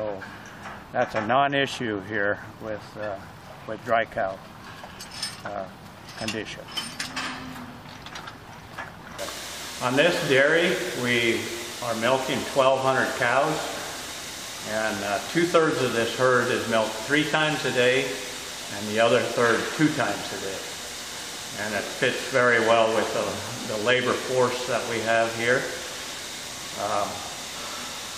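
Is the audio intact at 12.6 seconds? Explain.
Yes, at 12.6 seconds the audio plays through cleanly, with no dropout, click, distortion or other fault at that moment.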